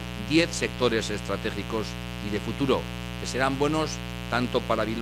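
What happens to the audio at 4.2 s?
At 4.2 s a steady, raspy buzz sits under the sound, as it does through the whole clip, loud enough to sit only about 10 dB below it. This mains buzz comes from 60 Hz switching spikes, twice per cycle, spraying harmonics into the kilohertz range.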